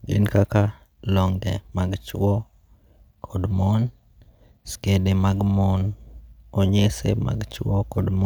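No technical faults are audible.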